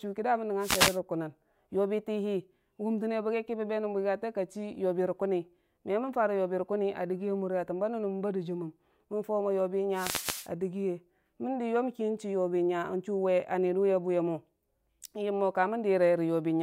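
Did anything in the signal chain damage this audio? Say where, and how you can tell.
Yes. Wireless microphone noise hits appear at 0.59 to 0.99 s and again at 9.92 to 10.50 s, each a brief swish of static that rises over the speech and then clears. The damage happens in the analogue radio link ahead of the receiver. Reflected copies of the FM carrier momentarily cancel the direct signal, so the receiver's own noise climbs as the carrier weakens.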